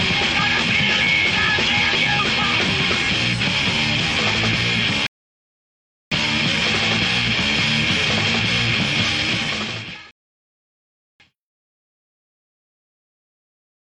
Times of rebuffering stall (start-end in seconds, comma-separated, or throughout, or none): 5.07-6.12, 10.11-11.20